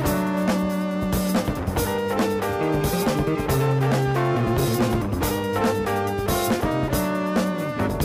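Nothing goes wrong anywhere in this clip, so there's simply no technical fault to point to.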